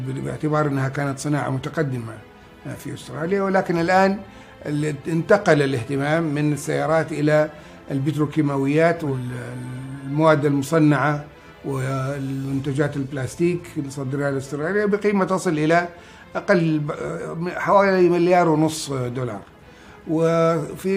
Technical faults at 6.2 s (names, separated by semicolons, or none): dropped samples